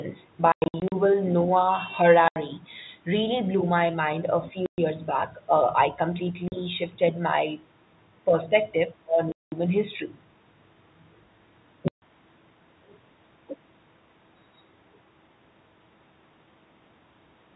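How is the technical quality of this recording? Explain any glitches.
The main problem here is packet loss filled with silence, which chops holes into the speech six times. The worst stretch runs from 0.52 to 0.92 s, with about 240 ms dropped in scattered pieces, the longest gap 100 ms. Shorter holes follow at 2.28–2.36, 4.66–4.78, 6.48–6.52, 9.32–9.52 and 11.88–12.02 s. Lost packets were replaced with dead silence rather than concealed. The gaps come in steps that fit 20 ms packets and have hard edges, all over the narrow telephone-band sound of the line.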